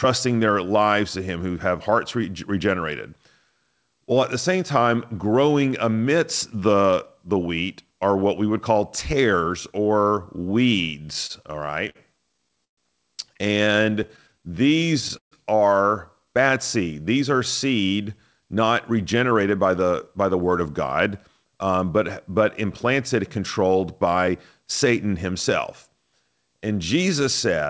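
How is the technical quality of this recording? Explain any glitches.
The recording passed through a call link and has two glitch types, with nothing audible above 8 kHz, which fits a wideband call codec such as G.722.

Repeated stalls (stutter) occur from 11.04 to 12.79 s and from 13.65 to 15.33 s, ending just before "are bad seed". Packets arrived late, so the jitter buffer emptied about a dozen times per burst. The receiver stretched the last sound to fill each gap, up to 129 ms and 142 ms. Speech drags and stutters, yet nothing is lost.

Jitter buffer speed-up runs from 18.08 to 23.39 s. Excess buffered audio was trimmed in tiny pitch-period pieces, removing about 0.4 s. Speech plays at 107% speed at the same pitch and sounds hurried.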